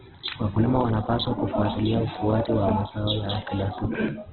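Throughout, the speech sounds rough and grainy, with nothing above 4.1 kHz. This is likely Opus compression short of bits, filling bands with noise at a rate near 8 kbps.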